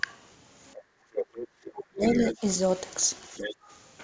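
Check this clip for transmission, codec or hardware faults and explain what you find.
Three kinds of echo-canceller fault affect the speech, all carried over a call path whose band stops at 8 kHz, consistent with G.722.

Background gated by the echo canceller: from 0.76 to 1.14 s the room sound drops by about 16 dB, and again from 3.55 to 3.69 s by about 17 dB. The canceller clamped the microphone while its loudspeaker played. The ambience briefly vanishes, then returns. A spectrogram shows the low-level noise floor darkening across all frequencies for those spans, and the waveform's quiet baseline visibly narrows.

Other side's voice leaking through: a second voice appears from 1.14 to 1.48 s, only slightly quieter than the main speech. It returns as a faint blip at 1.65 to 1.69 s, then from 2.02 to 2.56 s and 2.91 to 3.55 s at roughly 10 dB below the talker. The likely cause is far-end loudspeaker audio that the echo canceller failed to remove from the microphone. 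On a spectrogram, a second, overlapping set of harmonics runs under or beside the talker's.

Speech suppressed in double talk: between 1.7 and 2.42 s, with the leaked voice present for the later part of it, the talker's speech dips in pieces, falling by as much as about 40 dB. Together these dips last around 0.4 s. Likely the canceller, facing both voices at once, turned everything down. The waveform shows the speech envelope collapsing in chunks, and the spectrogram shows gaps cut through the harmonics.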